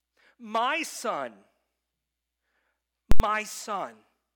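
Speech clip with invalid numbers at full scale from 3.12 to 3.20 s: invalid values pinned the output to one extreme value, far beyond the speech peaks, for about 85 ms, which fits a 4096-sample block, giving loud pops at both edges and nothing between.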